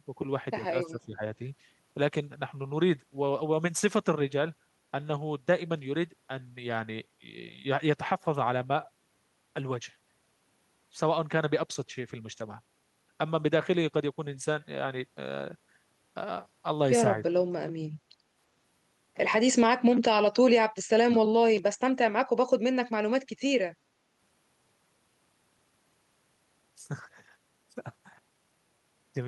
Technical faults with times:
0.89-1.22 speech suppressed in double talk
17.27-17.36 speech suppressed in double talk
21.05-21.13 speech suppressed in double talk

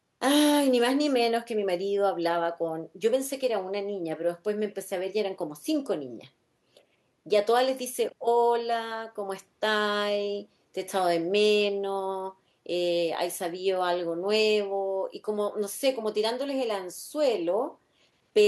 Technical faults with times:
none

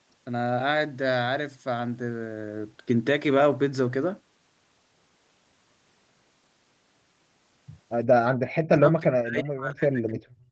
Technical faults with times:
8.48-10.48 speech suppressed in double talk

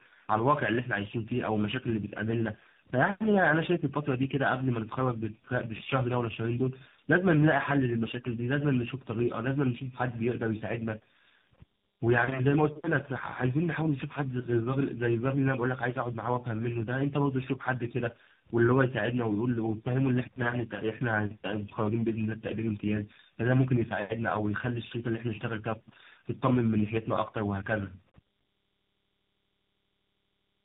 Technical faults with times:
0.00-30.64 tandem speech coding

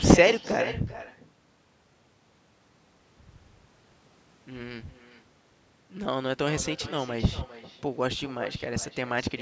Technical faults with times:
0.00-9.41 echo with no canceller

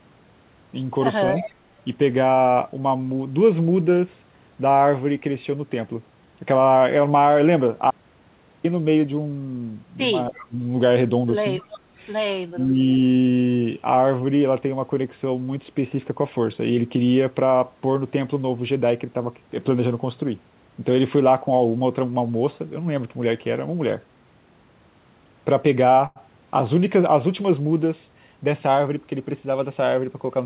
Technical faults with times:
1.33-1.53 echo leak
7.91-8.64 audio dropout to silence
10.27-10.48 echo leak
10.30-10.58 speech suppressed in double talk
11.58-11.80 echo leak
12.53-12.74 speech suppressed in double talk
12.71-12.75 echo leak
26.06-26.19 short stall from a late packet
28.06-28.97 jitter buffer speed-up

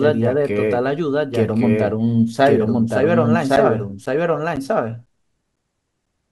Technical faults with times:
0.00-6.31 doubled audio track
3.56-6.07 periodic USB or driver dropouts

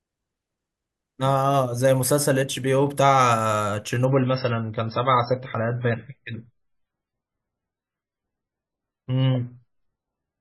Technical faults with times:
4.05-10.41 adaptive stream at a lower bitrate

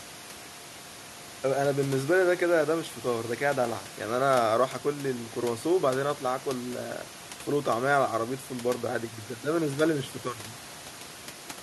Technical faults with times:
none

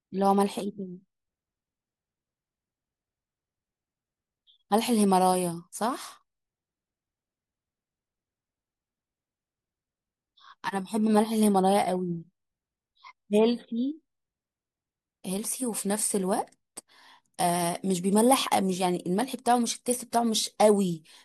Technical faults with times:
none

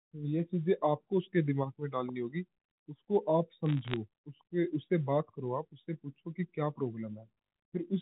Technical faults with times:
3.66-3.96 bit errors on a digital phone line

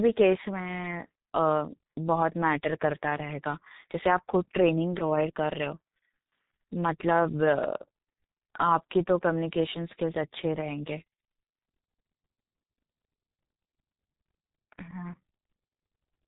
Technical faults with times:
0.00-16.27 G.723.1 codec

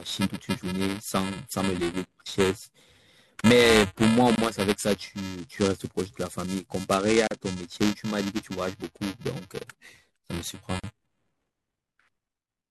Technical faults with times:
0.00-12.70 buffer tearing
4.35-4.38 gap at a join of encoded pieces
7.27-7.31 gap at a join of encoded pieces
10.79-10.84 gap at a join of encoded pieces

